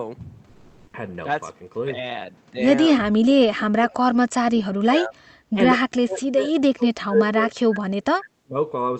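From 0.47 to 0.93 s, the real background is replaced by comfort noise for about 460 ms. The room sound loses its detail and turns into a flat, steady hiss. Its level shifts by about 8 dB. The sender likely stopped transmitting during the pause, which fits Opus discontinuous transmission. The receiver then filled the gap with synthetic noise. The background here sits about 47 dB below the loud passages.

Later, speech is suppressed in double talk. This is likely an echo canceller that could not tell the talker from the far-end echo and turned both down. The speech sinks from 4.77 to 5.19 s, by around 30 dB at its deepest. A brief dip of around 10 dB follows at 5.54 to 5.58 s. It sinks again from 5.85 to 6.47 s, by around 40 dB. From 6.74 to 8.56 s it comes and goes in pieces for about a second and a half, dropping by around 35 dB. The call path behind all this is band-limited near 8 kHz, which fits Opus at about 32 kbps.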